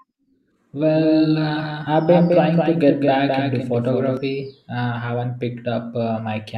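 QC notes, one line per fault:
0.95–4.17 s, doubled audio track: the speech is joined by a second, full-band copy trailing roughly 200 ms behind and around 5 dB quieter, with no decay or room colour, switching in and out abruptly; likely a second capture path or out-of-step edit.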